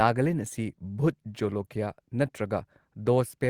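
No technical faults can be heard anywhere in the recording.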